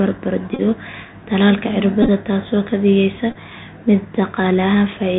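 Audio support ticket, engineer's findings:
Bluetooth CVSD headset codec, whole clip. Band stops near 4 kHz, granular hiss under the speech, scratchy s sounds, distortion on loud high content. Delta modulator's adaptive step can't keep up. Fits a 64 kbit/s CVSD link.

Bluetooth headset packet repeated, at 0.54–0.61 s, 2.03–2.09 s and 3.31–3.36 s. Short buzzy roughness, near 267 Hz. Headset link dropping packets, and the chip re-decodes the previous packet every 3.75 ms. About 37.5, 41.2 and 26.2 ms lost, scattered. Longest runs around 20, 15 and 10 ms.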